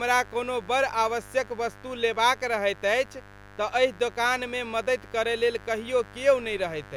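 A raspy mains buzz runs under the speech throughout, with spiky 50 Hz harmonics reaching into the kilohertz range, about 20 dB below the speech, unlike a smooth, pure hum.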